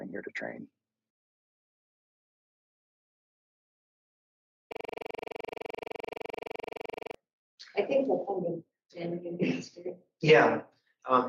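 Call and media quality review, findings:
System hang loop, 4.72–7.15 s: one 42.67 ms slice repeats 57 times at 23.4 Hz, giving a rapid stuttering drone. Host or driver stalled while the audio device kept replaying its ring buffer; the loop length fits a 2048-sample buffer.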